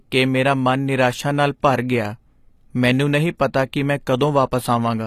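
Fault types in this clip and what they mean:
HE-AAC compression: The speech was likely encoded with HE-AAC at a low rate fitting about 24 kbps. The codec keeps only the lower spectrum and synthesises the treble by copying bands upward, so s sounds turn plainly gritty and metallic, with nothing above 14.9 kHz.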